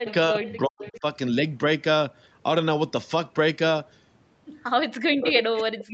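With both sides talking at once, the echo canceller likely could not tell the near talker from loudspeaker echo, so it turned everything down. The result is speech suppressed in double talk: from 0 to 0.09 s the sound drops very deeply, nearly to silence. At the same time, an echo leak from the far end's loudspeaker likely slipped past its canceller and was sent back. From 0.06 to 0.14 s a faint copy arrives about 352 ms late, well below the main level.

The same pairing returns later. Suppression chops the sound in deep dips across 0.29 to 1.05 s. Within that span, echo fragments delayed about 353 ms and quieter still surface at 0.46 to 0.54 s and 0.81 to 1.0 s. Suppression clamps down again from 5.0 s to the end.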